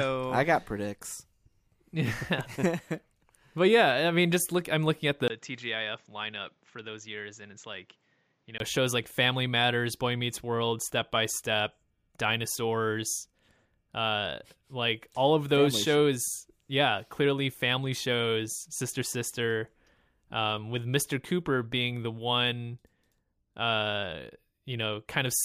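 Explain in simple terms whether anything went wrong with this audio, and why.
Right after "look I'm looking at", at about 5.28 seconds, the sound briefly drops out, then comes back noticeably quieter, duller and boxy, with a faint new background noise. It stays that way until about 8.60 seconds, when it clears up again just before "shows like". This is most likely an input switched to a poorer device: the recording jumped to a lesser microphone that can't capture the crisp top end above about 7.7 kHz, then jumped back.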